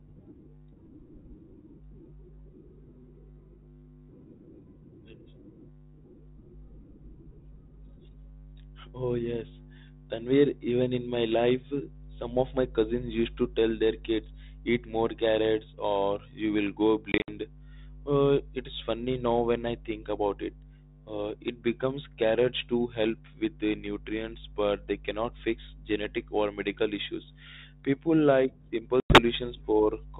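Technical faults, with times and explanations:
17.12–17.32 s and 29.00–29.20 s, packet loss on an ADPCM call: the sound drops into hard-edged silent gaps and comes back with some distortion that settles within tens of milliseconds. About 100 ms goes missing each time, likely around five lost packets. At 17.12 s the loss is scattered over 160 ms, with the longest hole 60 ms. Silence replaces the lost audio, so the ADPCM decoder's predictor and step size fall out of step with the sender's until they realign.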